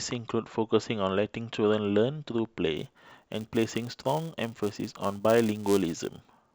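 Speech recording where, from 2.77 s to the end, a filter restarted on every block leaves a 200 Hz buzz riding the voice, each block opening with a small reset tick.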